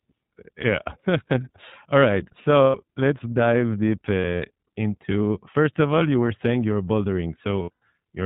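The whole speech clip runs through the iLBC codec, which here sounds like about 15 kbps in 20 ms frames: narrowband, nothing above 4 kHz, audibly rough and a bit synthetic. From 2.62 to 2.78 s, between "all right" and "let's dive deep", lost iLBC frames leave about 120 ms of buzzy held vowel where the decoder repeats the last pitch cycle. The same thing happens at 4.20 to 4.47 s, before "into first of all", as short scattered dropouts. At 7.62 to 7.82 s it happens again with a longer run of about a tenth of a second that fades.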